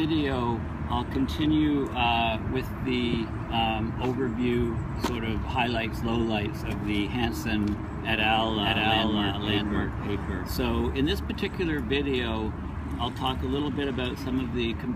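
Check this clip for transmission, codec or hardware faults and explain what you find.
One fault is present: a doubled audio track from 8.34 s to 10.96 s. For that stretch the sound plays twice. A second full-band copy trails the first by about half a second, at roughly the same loudness. It carries no decay or added room tone. It cuts in and out abruptly at the edges of the section. The likely cause is a second capture via a slower path, mixed back in out of step with the original.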